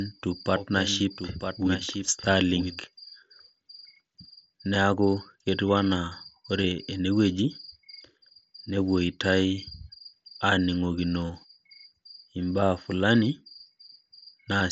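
From the very start until 2.84 s, the speech is shadowed by a second full-band copy about a second behind, roughly 5 dB quieter, with no room colour, cutting off abruptly. This doubled audio track likely comes from the signal being captured twice through a slower path.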